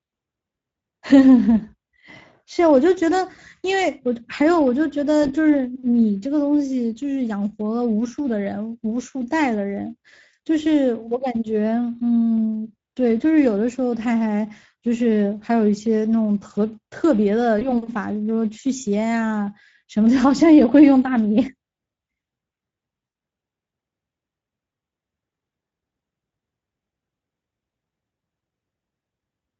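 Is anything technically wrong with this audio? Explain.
Yes. The whole clip carries Speex codec damage. The speech sounds noisy and hoarse. This CELP coder has too few bits for the excitation. The sound fits a middle setting of about 16.8 kbps.

There are also three dropouts from VoIP packet loss concealed by the speech codec, at 5.23 to 5.32 s, 17.59 to 17.74 s and 23.05 to 23.13 s. The first two lose about 20 ms each; the third loses about 80 ms. The decoder stretches the last pitch and filter into a fading buzz or coloured noise. The speech stays weak briefly afterwards.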